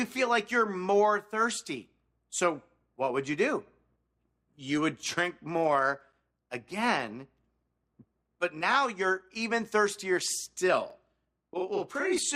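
From 10.90 s to 12.18 s a channel delay (doubling) appears. One channel arrives about 46.4 ms behind the other, a lag that fits a 2048-sample buffer, and when the two are folded to mono the late copy stands apart as a slap echo at equal level, thickening every onset. On a waveform each transient shows a twin peak of matching height 46 ms later. A spectrogram shows onsets smeared into doubled vertical edges, with fine comb-like ripples across the spectrum.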